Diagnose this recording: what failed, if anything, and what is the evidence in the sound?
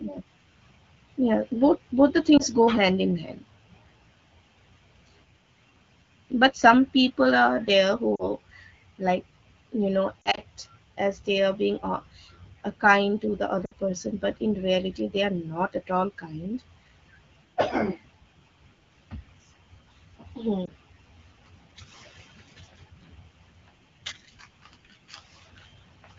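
Lost AMR speech frames on the radio link: brief warbles and dips at 2.37–2.42, 8.15–8.30, 10.22–10.42, 13.65–13.72 and 20.66–20.70 s. Damaged frames failed their checksum, so the AMR-WB decoder held the last good pitch and vocal tract settings while the gain faded.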